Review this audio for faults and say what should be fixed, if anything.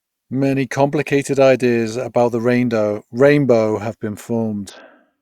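From 4.70 s to the end at 5.22 s, right after "have been", a Bluetooth SBC bit pool drop starves the upper sub-bands and quantises the rest coarsely, consistent with a bit pool falling from 28 to 6 (around 60 kbps); the speech turns dull and gritty. Keep the Bluetooth link free of congestion so the encoder never has to cut its bit pool.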